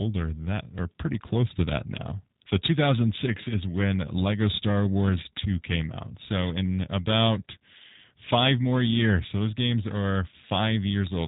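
From start to finish the speech carries plainly audible G.729 codec damage. It is resynthesised from a vocal-tract filter and sparse pulses, so it sounds rough and slightly synthetic. A spectrogram shows a hard ceiling at 3.8 kHz with nothing above, which fits an 8 kbit/s VoIP coder.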